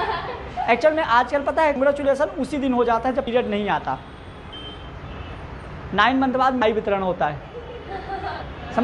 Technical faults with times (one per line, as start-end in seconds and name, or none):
6.61 compressed frames skipped